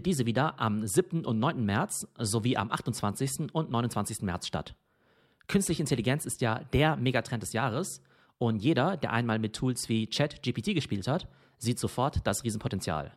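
No technical faults are audible in the speech.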